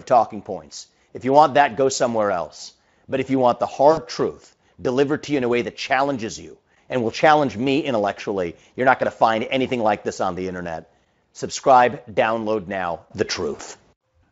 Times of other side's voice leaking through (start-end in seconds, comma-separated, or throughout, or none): none